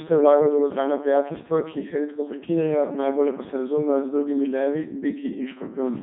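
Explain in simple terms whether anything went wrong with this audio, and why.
The whole clip has passed through a Codec 2 vocoder. It keeps only pitch, loudness and a rough tone shape, then rebuilds the speech from synthetic tones, which is why it sounds robotic and buzzy, with nothing above about 3.8 kHz.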